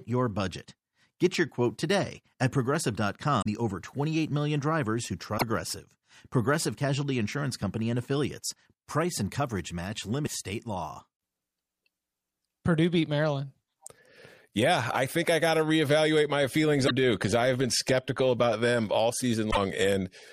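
Damaged data in a compressed stream at 3.38–3.47, 5.34–5.42, 10.23–10.28, 16.84–16.91 and 19.48–19.57 s: corrupted frames make the decoder lose sync, so the speech breaks into short chirps or blips.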